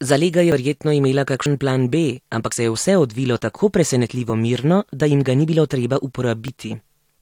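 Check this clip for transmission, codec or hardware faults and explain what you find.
The speech has five abrupt skips, each with the sound jumping forward and no gap of silence, at 0.52, 1.46, 2.52, 4.3 and 6.48 s. The likely cause is a dropped buffer (overrun): the capture side failed to collect its samples before the hardware overwrote them, so each chunk is lost and the audio on either side is spliced directly. The first two jumps skip roughly 70 ms, the third about 40 ms and the last two about 20 ms.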